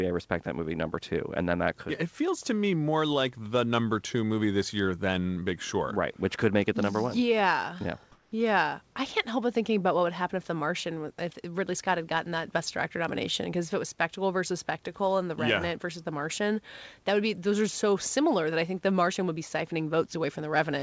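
Comfort noise in place of the background, 8.12 to 8.32 s: the room background turns flat and featureless at an unchanged level, likely because the sender paused transmission during silence.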